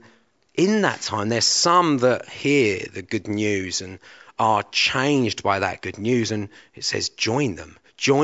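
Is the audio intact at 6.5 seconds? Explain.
Yes, at 6.5 seconds the speech plays through cleanly, with no dropout, click, distortion or other fault to be heard at that point.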